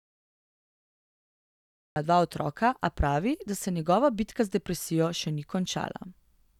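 Speech with a cut-off start: digital silence until 1.96 s, then the audio begins abruptly mid-sound before "dva otroka a pravi", with no attack or fade, unlike a gradual fade-in.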